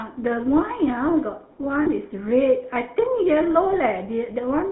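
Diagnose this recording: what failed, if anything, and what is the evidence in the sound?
Codec stage: the whole clip has that buzzy, gravelly GSM full-rate codec roughness, band-limited to 150 Hz to 3.4 kHz. Regular-pulse excitation modelling strips the fine detail.

Network stage: at 1.82 to 1.89 s there's a brief metallic ring, lost GSM frames. The decoder repeats the last good frame for about 40 ms, which fits two dropped frames.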